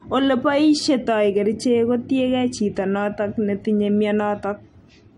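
No technical faults can be heard anywhere in the speech signal, which stays intact and continuous throughout.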